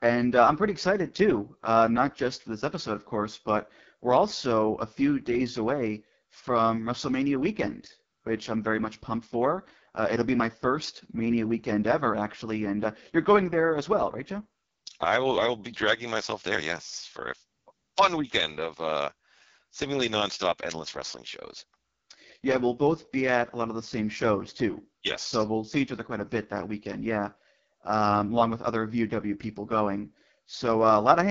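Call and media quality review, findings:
AMR wideband (HD Voice) codec, whole clip: speech rough and raspy, band-limited at 7.5 kHz. Heavy coding damage fits the lowest AMR-WB mode, near 6.6 kbit/s; sparse pulse excitation misses the voice's fine structure, and the top band above 6.4 kHz is noise-filled.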